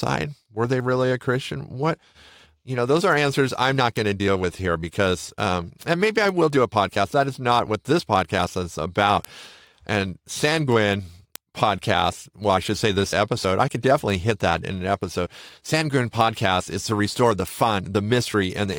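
Word clock ticks run from 0.17 s to 18.74 s, a train of sharp ticks of uneven strength about every fifth of a second, around a hundred in all beneath the speech. The receiving device is clocking the digital link on its own oscillator rather than locking to the sender, and the two drift apart by something near 100 ppm. At each slip a single sample is dropped or repeated, and that discontinuity is heard as a tick.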